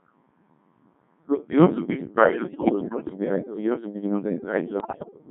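Speech encoded throughout with the Codec 2 vocoder, and heavily damaged by it. The decoder never rebuilds the original waveform. It resynthesises each frame from a handful of parameters (pitch, voicing, energy and a coarse spectral envelope) as a sum of sine waves, so the voice comes out robotic and buzzy with smeared detail. The thinness of the result points to one of the lower modes, around 1.6 kbit/s. Bit errors on digital voice radio then break the signal twice, from 2.24 to 3.15 s and again from 4.80 to 5.11 s. In such a low-rate stream every corrupted bit changes a parameter for a whole frame, so the synthetic voice lurches in pitch, loudness and timbre, turning into warbles, bleeps and unintelligible robotic babble. The first burst sounds like roughly one bit in ten flipped. The shorter second burst is worse, closer to one in five, and degrades more severely.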